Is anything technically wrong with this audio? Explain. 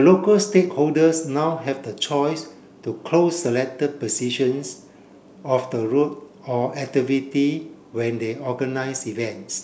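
No, nothing technically wrong stood out on listening to this speech recording.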